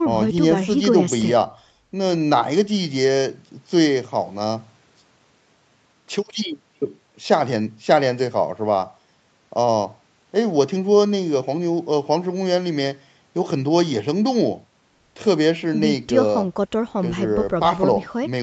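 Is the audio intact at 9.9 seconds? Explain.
Yes, the speech at 9.9 seconds is intact, with no fault at that moment.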